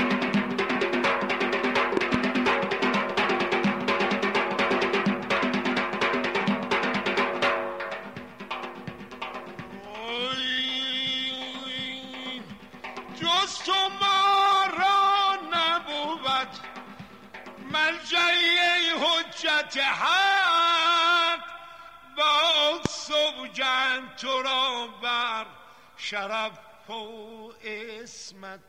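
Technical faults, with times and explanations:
1.97–2.16 s, loud pop: two sharp pops in quick succession, roughly 20 dB above the sound, which continues underneath; likely a voltage pulse from a switch or static discharge.
22.86–22.88 s, loud pop: a single brief pop, again roughly 20 dB over the sound, likely a voltage step from a plug or driver glitch.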